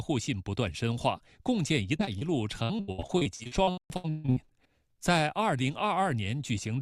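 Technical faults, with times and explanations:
1.97–2.01 s, 2.05–2.09 s and 2.19–2.23 s, short concealed packet loss: Three brief smears come in quick succession, each lasting a few hundredths of a second. In each one, about 20 ms of audio, which fits a single lost 20 ms packet, failed to arrive in time. The receiver covered the hole by extending the preceding sound, through pitch continuation or shaped noise, for roughly 13 to 23 ms before crossfading back into the real signal.
2.63–4.54 s, repeated packet loss (robotic sound): For almost two seconds the sound turns choppy, with fragments dropping out. About twenty separate losses removed roughly 880 ms in total, the longest gap about 143 ms. Each hole was patched by stretching the last good sound, and the next loss followed before the signal could recover. Synthetic fill makes up nearly half of this stretch, which explains the robotic, broken texture.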